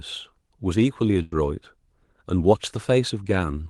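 At 1.22 s the speech stops moving forward: the last sound is stretched into a held buzz or hiss that fades over roughly 90 ms, and at 1.36 s the speech picks up slightly further along, with a short piece simply gone. This is a burst of packet loss. Consecutive packets never arrived in time, so the receiver filled the hole by extending and attenuating what it had last played. Around it, the call codec's band limit near 12 kHz can be heard.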